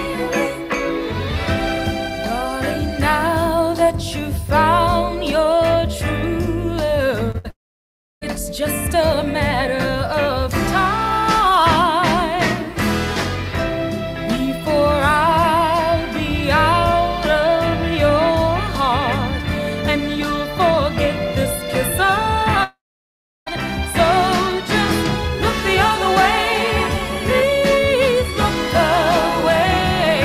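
Short concealed packet loss at 7.31 to 7.36 s: about 20 ms of audio never arrived, and the receiver bridged the hole by extending the preceding sound, leaving a brief smear.

A burst of packet loss follows at 7.38 to 7.46 s, where about 60 ms went missing. The continued sound fades as a held buzz or hiss before the audio picks up again further along.

A long network dropout is the likely cause of the stretch from 7.50 to 8.23 s and again at 22.63 to 23.48 s. Each time, the sound trails off into about 0.7 s of silence, and about 0.72 s and 0.84 s of audio respectively is lost when playback resumes.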